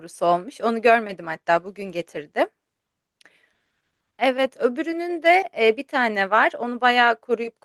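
No technical faults can be heard anywhere in the speech recording, and the signal holds steady throughout with nothing breaking its continuity or level.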